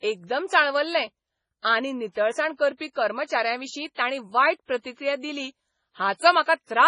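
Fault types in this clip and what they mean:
MP3 compression: Throughout the clip the speech sounds watery and swirly, with a dull top end and nothing above 10.5 kHz. Faint detail flickers in and out, and s sounds carry a metallic chirp. This is likely heavy MP3 coding. The encoder is starved of bits, so it removes the treble outright and drops quieter frequency components whenever the budget runs out. The damage is severe enough to fit a bitrate of about 24 kbps.
pre-echo: From 3.94 to 3.98 s, a brief hiss of about 32 ms runs just ahead of a sharp onset in the speech, and that onset sounds softened and smeared rather than crisp. The codec processes audio in blocks and spreads its coding noise across the whole block. When a sudden loud attack lands late in a block, noise scaled for that loud moment also fills the quiet stretch before it, where it is no longer masked.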